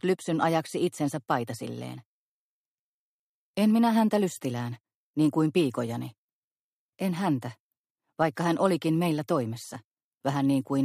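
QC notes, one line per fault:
No fault to note in this clip.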